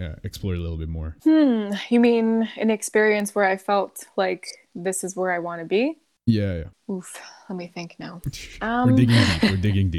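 At 3.20 s there is a single sharp tick. It is a bit error spike. One bit in one sample flipped, in memory or on a digital link. That sample jumped by a power of two to about -16 dBFS, then the next sample returned to normal. The click is broadband and has nothing to do with the speech around it. A second, quieter spike, at about -22 dBFS, comes at 9.66 s.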